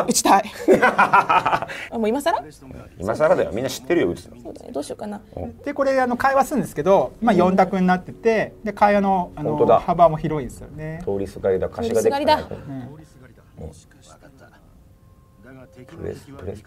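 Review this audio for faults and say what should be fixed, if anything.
No faults turn up in this audio, so nothing needs to be fixed.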